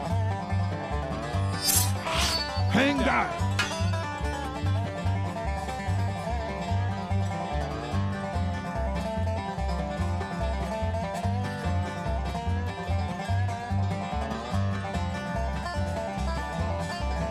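No technical faults can be heard anywhere in this recording.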